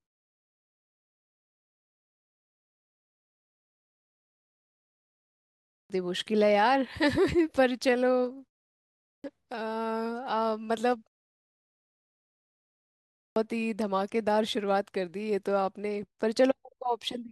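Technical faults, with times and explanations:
5.44–5.90 s, 8.77–9.24 s and 12.93–13.36 s, clipped start after a pause: each time, speech resumes abruptly out of silence with its opening sounds missing, roughly 430 to 470 ms lost. The output device drops into a sleep state during silence, and on new signal it needs that time to wake and lock before it passes audio, so the onset is swallowed. It happens after the 5.44 s opening silence and after pauses of only 0.35 s and 1.93 s.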